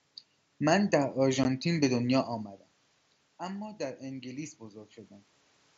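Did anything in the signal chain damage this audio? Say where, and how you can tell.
Yes. At 1.44 s the Bluetooth link between headset and phone drops about 15 ms of speech, which fits two lost mSBC frames. This is unconcealed Bluetooth headset packet loss. The waveform flatlines with hard edges, and the spectrogram shows a thin vertical gap across every band.

From 3.38 to 4.96 s, call processing shows automatic gain rising. The input had fallen about 15 dB, and the gain climbs about 4 dB over 1.6 s. Voice and room noise swell together, so the spectrogram's noise floor brightens gradually alongside the speech envelope.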